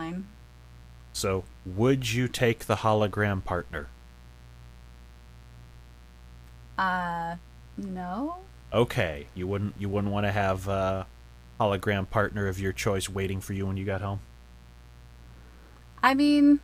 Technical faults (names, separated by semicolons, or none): mains buzz